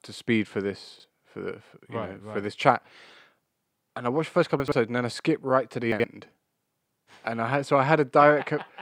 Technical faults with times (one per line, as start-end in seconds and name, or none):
0.96-1.04 chunks out of order
4.60-4.72 chunks out of order
5.92-6.04 chunks out of order